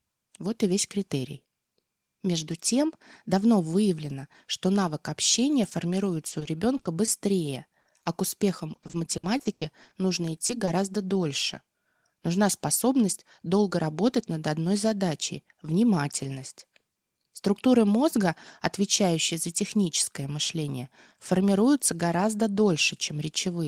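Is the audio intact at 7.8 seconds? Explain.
No: short concealed packet loss at 7.81 to 7.87 s. The missing 40 ms was filled by extending the preceding sound, a brief smear rather than silence.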